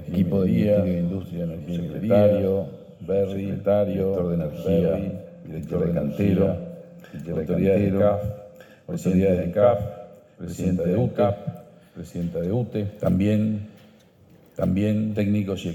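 From start to finish the audio carries a doubled audio track: a second, full-band copy trails the original by about one and a half seconds at roughly the same loudness. It likely comes from the signal being captured twice, once through a slower path. The repeat has no decay or room colour, so it sounds like a clean, flat echo. On a waveform or spectrogram every event appears twice, the second an identical shifted duplicate.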